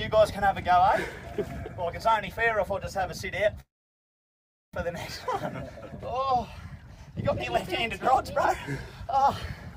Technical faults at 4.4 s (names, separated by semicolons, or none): call audio freeze